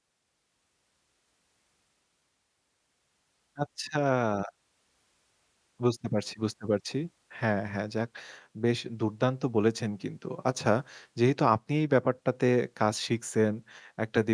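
No technical faults can be heard anywhere in the speech.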